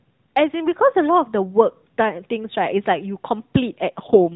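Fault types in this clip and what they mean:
AMR rate drop: in the last half-second, 3.92 to 4.36 s, the speech gets buzzier and more synthetic with no gap or bandwidth change. That sounds like the link stepping down from AMR's 12.2 kbps mode to 4.75 kbps, trading bits for error protection.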